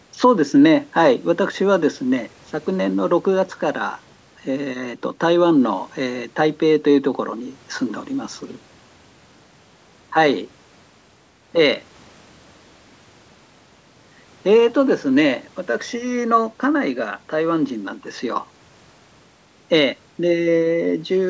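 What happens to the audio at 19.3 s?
Nothing goes wrong at 19.3 s: the speech carries on intact, with only the ordinary shaping of call microphone processing, which trims the lowest bass and keeps nothing above 8 kHz.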